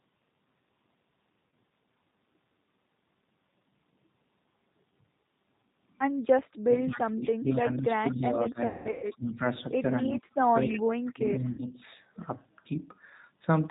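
Throughout, the speech carries the sound of the G.729 codec, here the G.729A variant at 8 kbit/s. The voice is rebuilt from a vocal tract filter, a pitch predictor and a few pulses per 10 ms frame, so nothing reaches above 4 kHz and the result has a plainly audible rough, slightly synthetic texture. Unlike the faults below, this colouring is constant rather than tied to particular moments.

At 1.5 s comes the first VoIP packet loss concealed by the speech codec. One packet, 30 ms of audio, is missing, and the decoder fills the gap by extending its last pitch and filter, giving a brief buzzy smear instead of silence. A dropout would leave a hole. Concealment stretches the sound, and because each frame depends on the one before, the speech needs a moment to recover.

From 6.63 to 9.42 s the talker's level sinks by roughly 25 dB over about two seconds in total, coming and going in pieces. 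This is speech suppressed in double talk, likely caused by an echo canceller that turned the talker down while the far side was also speaking. It sounds like ducking and thinning, not like the smeared tones of concealment.

Inside that stretch, from 8.09 to 8.28 s, a faint copy of the voice trails 214 ms behind, about 20 dB below the speech. This is an echo leak, likely from a loudspeaker on the other end whose canceller let some of the microphone pickup through. The fixed delay separates it from reverberation, which would blur continuously rather than return as a distinct, chopped repeat.

From 8.67 to 9.07 s a heavier burst of packet loss takes 300 ms out of a 360 ms span, with the longest run lasting 180 ms. The concealment drags into a fading buzz before the speech returns, still weak. Short echo scraps follow at 9.26 to 9.32 s and 9.97 to 10.03 s, about 30 and 35 dB down.

From 10.02 to 10.87 s the double-talk suppression cuts deepest, about 35 dB over roughly 0.7 s. 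At 10.63 to 10.8 s the loudest echo leak breaks through at only about 10 dB below the speech, again 214 ms late. Suppression returns from 11.12 to 11.79 s, dipping about 25 dB over some 0.5 s. Within it, from 11.52 to 11.64 s, 60 ms of lost packets add a short concealed buzz on top of the lowered level.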